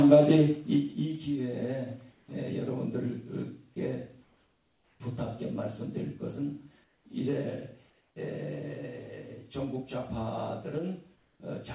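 The sender's activity detector likely halted transmission during quiet gaps, so the receiver substituted comfort noise in place of the background at 2.12–2.28, 4.24–5.0, 6.84–7.06, 7.9–8.16 and 11.16–11.4 s. The genuine background, sitting about 34 to 40 dB below the loud passages, turns into a flat, textureless hiss about 2 to 3 dB quieter, the longest stretch lasting 0.76 s. Like the rest of the call path, it has nothing above 4 kHz.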